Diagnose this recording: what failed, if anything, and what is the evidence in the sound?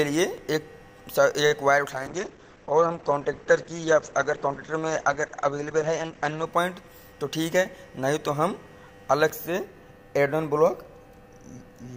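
A short stall from a late packet at 1.46 to 1.52 s, in the network and jitter buffer stage. A packet missed its playout time and the buffer ran dry. The receiver held the last sound for 47 ms, then resumed where it left off, so nothing is lost but the delay grows by 47 ms.

A call bitrate drop from 1.92 to 6.52 s, at the codec stage, driven by the call's bandwidth estimate. The encoder falls from 128 to 12 kbps and the audio bandwidth narrows from 20 kHz to 8 kHz, so the sound turns muffled and coarse for about four and a half seconds.

A jitter buffer speed-up from 6.73 to 7.13 s, in the buffer stage. With more audio queued than the buffer's target, the receiver trimmed short pitch-period pieces in succession, removing about 50 ms. Playback runs at 110% speed with unchanged pitch, so that stretch sounds hurried.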